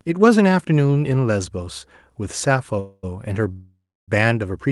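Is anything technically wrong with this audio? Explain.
Yes, this speech has two call audio freezes, at 2.79–3.05 s and 3.52–4.10 s. The likely cause is held-up packets draining the jitter buffer. The receiver stretched the last sound into a fading buzz, lasting 0.24 s and then 0.56 s, the second decaying into about 0.28 s of silence. Speech resumes where it stopped, with nothing lost, only delayed. A spectrogram shows smeared, fading bands, and the waveform shows a decaying envelope before the flat gap.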